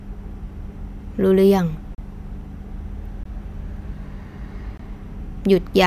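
Three times, a block of samples in the speech was replaced with zeros, producing a block of digital silence: 1.95 to 1.98 s (34 ms), 3.23 to 3.25 s and 4.77 to 4.79 s (20 ms each). Each hard cut is heard as a brief hole.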